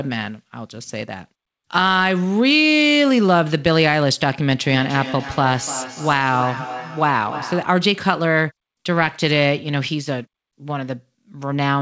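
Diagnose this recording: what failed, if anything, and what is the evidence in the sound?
Feedback echo between two devices sits in the call path, from 4.62 to 7.83 s. The speech returns at a steady interval of roughly 0.3 s, each pass thinner and more ringing, peaking at about 12 dB below the direct speech. A second device in the same room is replaying this call's audio into the microphone. The echo canceller only subtracts its own playback, so the foreign copy re-enters the call.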